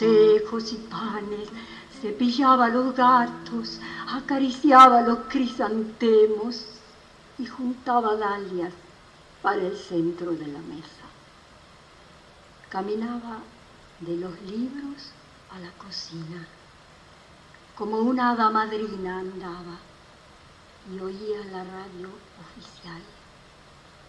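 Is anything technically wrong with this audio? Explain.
No, nothing technically wrong can be heard here.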